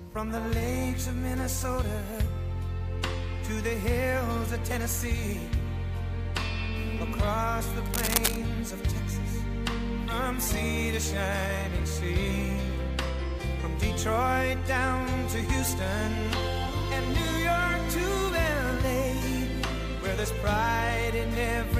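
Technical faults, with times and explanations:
7.86–8.36 s, cable scratch noise: a half-second patch of dense, uneven scratching, roughly as loud as the sound itself, most likely from a worn cable, connector or control being moved. Its irregular, clustered bursts distinguish it from evenly spaced clicks or digital dropouts.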